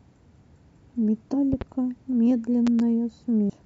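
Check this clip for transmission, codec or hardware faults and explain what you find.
The speech in this clip carries two kinds of fault: brief corruption of the compressed stream and two pairs of loud pops.

Damaged data in a compressed stream occurs at 1.33 to 1.35 s and again at 3.49 to 3.51 s. Corrupted bytes make the decoder misread those frames and lose sync until it finds the next frame header, producing a short chirp or blip.

Loud pops occur at 1.53 to 1.64 s and at 2.67 to 2.82 s, each a double pop peaking about 10 dB above the speech. A sudden voltage step, likely from a plug, switch or static discharge, punches through while the speech continues underneath.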